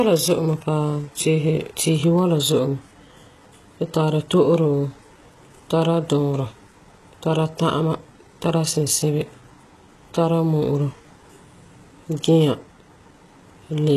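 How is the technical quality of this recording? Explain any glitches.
The recording carries plainly audible codec damage throughout. This is likely HE-AAC compression, fitting roughly 16 kbps: the treble is synthesised from copied lower bands, so sibilants sound gritty and metallic, with nothing above 12.4 kHz.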